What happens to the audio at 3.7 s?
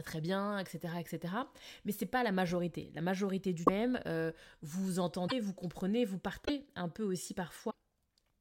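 At 3.65 to 3.69 s the speech breaks for about 40 ms: the audio skips ahead and the stretch right after the skip comes out garbled. The likely cause is a broken MP3 bit reservoir. Frames seem to be missing, so the next frame reaches back for data it had stored in earlier frames, finds bytes from a different frame, and decodes nonsense. The 40 ms span fits one or two frames of about 26 ms each. On a spectrogram this shows as a narrow vertical seam where the harmonic pattern cuts off abruptly. On the waveform it appears as a sharp discontinuity.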